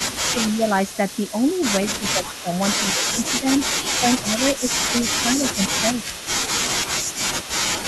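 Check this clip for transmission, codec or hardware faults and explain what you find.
Two faults from a call's echo handling run through the speech.

Echo leak, from 0.0 to 2.62 s, 3.18 to 6.28 s and 6.85 to 7.85 s: a faint copy of the voice trails 180 ms behind, about 15 dB down. The likely cause is a loudspeaker echo canceller on the far side letting part of its microphone pickup return.

Speech suppressed in double talk, at 0.33 to 0.57 s and 2.0 to 6.07 s: the voice dips in pieces by up to roughly 10 dB, for around a tenth of a second early and about a second and a half later, likely because the canceller ducks everything when both sides talk.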